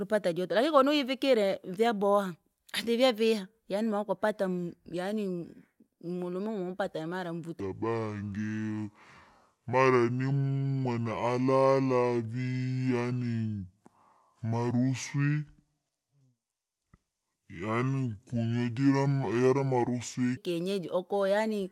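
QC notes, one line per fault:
7.6–20.4 s, section at the wrong speed: this stretch of speech plays back at about 0.61 times its proper rate, so everything drags and drops roughly ten semitones, deep and sluggish. Likely the section got fitted to the wrong clock.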